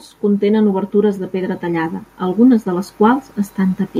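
From 0.2 s to 3.88 s the automatic gain is rising. The control hears too quiet an input and slowly lifts everything about 7 dB, so the speech and background swell together.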